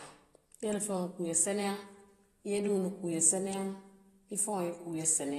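Speech here, and the whole thing carries audible lossy-codec damage, most likely AAC compression at a low bitrate. There's nothing above about 12.4 kHz, so the top end sounds dull and shut off, and sibilants and held vowels have that smeared, warbly, fizzy texture you get when the encoder quantises coarsely and starves bands. That pattern fits AAC-LC running somewhere around 32 kbps, where the hearing model drops detail it thinks you won't miss.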